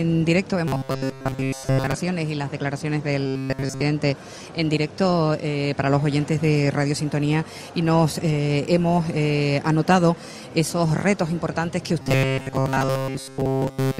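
From 0.68 to 1.94 s, 3.27 to 3.82 s, and 12.02 to 14.0 s there's robotic sound from repeated short buffers, a rigid 133 Hz buzz, likely from about 7.5 ms chunks being looped.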